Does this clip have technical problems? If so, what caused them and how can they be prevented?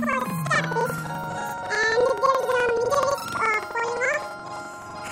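Yes. Throughout the clip the sound plays an octave high, with a steady flutter at about 11.7 Hz, yet its overall pace stays normal. This is planar audio read as interleaved. Each block of about 85 ms, which fits a 4096-sample block, stores all left-channel samples and then all right-channel samples, but it was read as alternating left-right pairs. Each block is therefore squeezed into half its time and played twice, first left and then right. To prevent it, match the reader's channel layout flag to the actual buffer format, or convert planar data to interleaved before handing it on.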